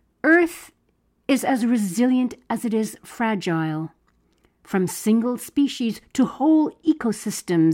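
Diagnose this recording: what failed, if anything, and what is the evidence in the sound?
Channel delay (comb filtering), from 6.19 to 7.26 s, at the driver or buffer stage: one channel runs about one sample late before the mono sum. That puts the first cancellation notch near 20 kHz, so the speech turns slightly dull at the very top.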